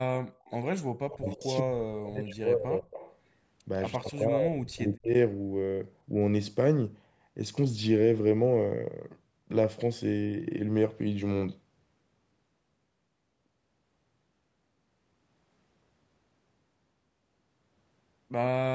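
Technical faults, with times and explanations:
0.45 s, 1.10–1.44 s, 2.91–3.16 s and 3.92–4.19 s, echo leak: a faint copy of the speech trails the original by about 150 ms. It is barely there at 0.45 s, strongest at 1.10–1.44 s (roughly 15 dB below the speech), and around 20 dB down in the two later stretches. The likely cause is a far end on loudspeaker whose echo canceller let part of its microphone pickup through and sent it back.
1.13–2.86 s and 3.98–5.14 s, speech suppressed in double talk: the speech sinks and breaks up in patches while the other side's sound is playing on the loudspeaker. It drops by as much as about 30 dB in the first stretch, over roughly a second and a half, and about 35 dB in the second, over about a second. The echo canceller likely could not tell this talker from the returning echo and turned both down together.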